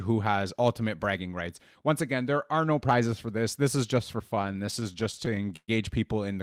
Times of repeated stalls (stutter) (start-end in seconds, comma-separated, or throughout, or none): 4.35-5.70